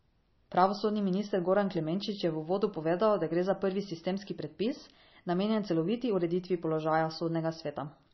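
Throughout, the speech stops at 5.9 kHz and swirls wetly, pointing to heavy MP3 compression at around 26 kbps, likely; a plain low-pass filter wouldn't make bands flicker.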